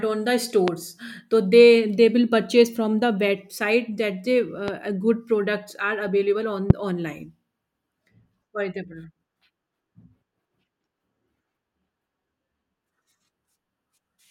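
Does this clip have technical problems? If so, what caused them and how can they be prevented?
Yes, there are three loud pops in this speech: one at 0.68 to 0.70 s right after "on the", one at 4.68 to 4.71 s, and one at 6.70 to 6.73 s just after "products are available". Each is a single sharp click standing about 20 dB above the speech (the middle one about 10 dB), with the talking carrying on underneath. The likely cause is a voltage spike from a switch, cable, static or driver glitch. To prevent it, secure the connectors, avoid switching gear mid-take, and keep drivers up to date.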